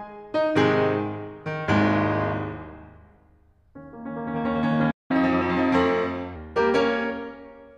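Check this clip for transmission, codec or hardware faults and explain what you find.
The music has two linked playback faults: a stall and then a faster catch-up.

At 4.91 s the music halts mid-flow and stays silent until 5.11 s, a gap of about 0.19 s. This is a playback stall, likely caused by the player running out of buffered data or having its output thread blocked. The music then resumes exactly where it stopped. Unlike a packet-loss dropout, which gives brief holes with material skipped, this is a single longer silence with nothing missing afterwards.

From 5.11 s to 6.36 s the player goes into catch-up at higher speed. It resamples the backlog at 1.15 times normal speed to regain the time lost in the stall. Because resampling changes speed and pitch together, the music runs quicker and sits about two semitones sharp, then drops back to normal at 6.36 s. Wow or flutter would make the pitch waver continuously. 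Here the shift is a steady raised block that follows directly on the silence.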